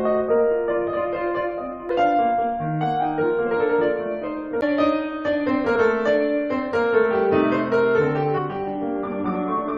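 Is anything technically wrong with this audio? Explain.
Yes, there are two problems in this music clip.

From about 0.87 s to the end there's channel delay (comb filtering). One channel runs roughly 20 ms behind the other, and folding them to mono cancels shared content at evenly spaced frequencies starting around 30 Hz. That leaves a rough, slightly doubled quality.

There's also damaged data in a compressed stream at 1.89 s, 4.61 s, 5.75 to 5.77 s and 8.37 to 8.39 s. Corrupted frames throw the decoder off sync while it hunts for the next valid header, so each spot comes through as a short chirp or blip.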